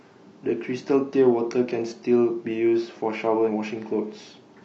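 At 3.44 s the speech is broken for about 50 ms, until 3.49 s, by damaged data in the compressed stream. Bytes in that part of the encoded file were lost, zeroed or overwritten, so the decoder could not read the frames there correctly. It lost frame sync and searched for the next valid header before normal decoding resumed. The result is a short glitch, a chirp, squawk, click or brief hole, that cuts across the speech.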